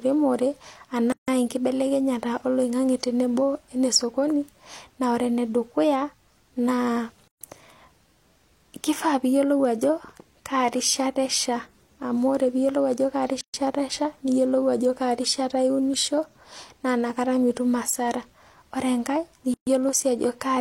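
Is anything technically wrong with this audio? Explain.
Yes. Gaps at a join of encoded pieces occur at 1.12, 7.28, 13.41 (between "ore piiyiolou ajo kaa" and "esha niyiolou") and 19.54 s, every 6.0 s, lasting 156 then 130 ms. Separately encoded segments were joined with encoder delay and padding untrimmed, so the speech stops and resumes where it left off.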